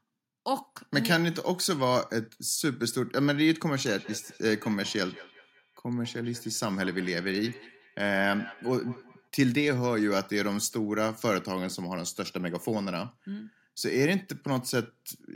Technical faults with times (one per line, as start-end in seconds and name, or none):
3.85-9.30 feedback echo between two devices